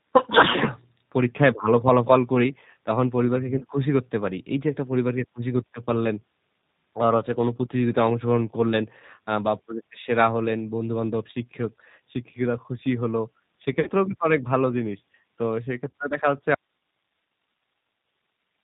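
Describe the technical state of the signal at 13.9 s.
Right around 13.9 s you're at the tail of a VoIP packet loss concealed by the speech codec, running from about 13.80 to 13.91 s. Roughly 60 ms of audio went missing, which fits three dropped packets. The decoder filled the gap by extending its last pitch and filter settings while turning the level down frame by frame, so the sound smears into a buzzy tone or coloured noise that fades. Since each frame builds on the one before, the voice stays weak or distorted just after the gap.

Underneath that, the whole clip has audible G.729 codec damage, consistent with G.729A at 8 kbit/s. The codec rebuilds speech from a vocal tract model, a pitch predictor and a few pulses per frame, and drops everything above 4 kHz, so the speech sounds dull, a little rough and synthetic.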